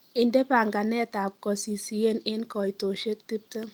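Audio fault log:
No audible faults found.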